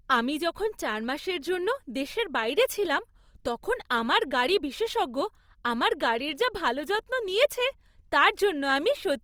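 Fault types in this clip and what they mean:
Opus compression: the speech sounds plainly grainy and rough, with noise filling bands rather than holes, likely Opus music mode near 24 kbps, still reaching 20.2 kHz.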